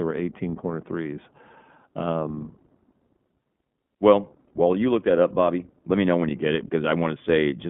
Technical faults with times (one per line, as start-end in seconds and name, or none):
0.00-7.70 iLBC codec